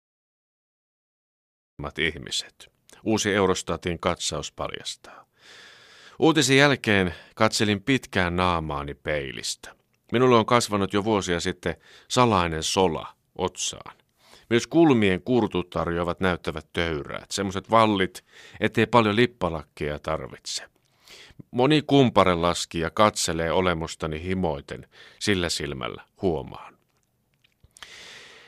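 For the first 1.79 seconds there's nothing but digital silence, and then the speech kicks in mid-sound with no attack or fade. That's a classic cut-off start: the recording or stream only began capturing late, so the opening of that sound is simply missing.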